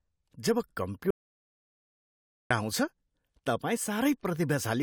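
At 1.1 s the speech cuts off abruptly into dead silence, with no room tone at all, and resumes mid-flow at 2.5 s. This audio dropout to silence loses about 1.4 s, most likely because the input link failed while silence kept being recorded.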